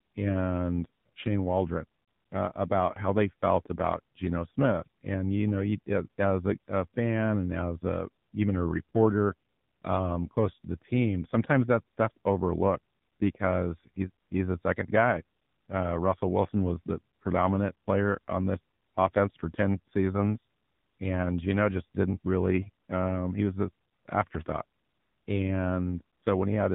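AMR narrowband mobile codec, throughout: the speech is cut off above 4 kHz and sounds plainly buzzy and synthetic, consistent with a low rate such as 7.4 kbps. Lost AMR speech frames, 2.04 to 2.08 s: a 40 ms stretch is rebuilt from the last good settings at falling gain, giving a brief dip just before "uh about how they".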